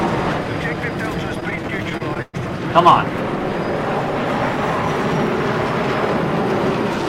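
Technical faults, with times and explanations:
1.35–2.36 s: repeated stalls (stutter). Within this second the playback halts 16 times as packets arrive late and the jitter buffer keeps running dry. At each stall the receiver holds the last sound and extends it, fading it during the longer holds, the longest being 114 ms. These fills add up to 282 ms, about 28% of the stretch. No audio is lost, but the passage drags and stutters.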